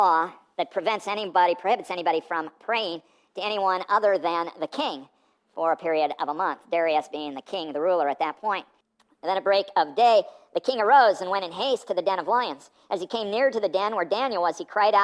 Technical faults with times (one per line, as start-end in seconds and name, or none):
0.00-15.03 wrong sample rate